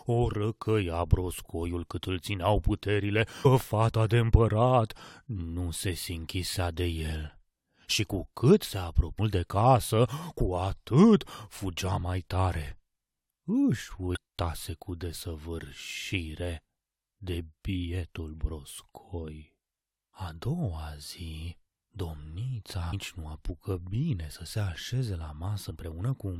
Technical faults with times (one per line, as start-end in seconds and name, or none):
3.44 damaged data in a compressed stream
9.18 damaged data in a compressed stream
14.15-14.17 damaged data in a compressed stream
22.92 damaged data in a compressed stream
25.69 damaged data in a compressed stream